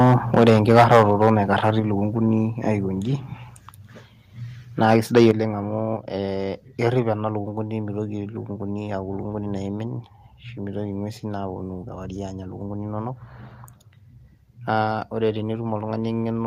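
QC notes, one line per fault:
0.0 to 1.3 s, 1.64 to 1.71 s and 4.82 to 5.31 s: microphone overload. The loudest syllables turn harsh and crackly, worst in the opening stretch, where peaks would have run about 13 dB past full scale, against about 3 dB and 4 dB in the later bursts. In each burst a few percent of samples are flattened at the ceiling. The likely cause is input gain set too high, so the converter cuts off the tops of the waveform.
0.81 s, 1.8 s and 5.31 s: microphone volume stepped down. The voice and the room behind it drop in level together in a single abrupt step each time, by about 2 dB, then about 4 dB, then about 7 dB. Each drop lands during or just after a distorted burst, which points to the call software reacting to the clipping and likely lowering the device's input volume.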